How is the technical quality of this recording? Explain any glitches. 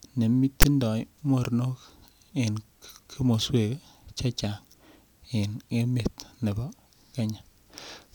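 There's one glitch worth flagging, right near the start of the speech. At about 0.62 s you get a very short, hard-edged burst of static. That's file tags played as audio: a block of text tags got read as if it were sample data. Text bytes aren't a real waveform, so they come out as a loud, buzzy rasp sitting off to one side of zero rather than centred, and it starts and stops abruptly because the block has sharp boundaries.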